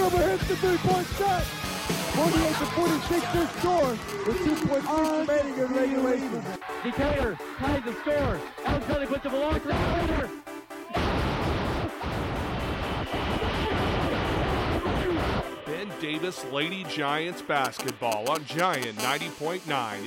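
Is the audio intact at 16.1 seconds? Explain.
Yes, at 16.1 seconds the audio is intact, with no dropout, click, distortion or other fault at that point.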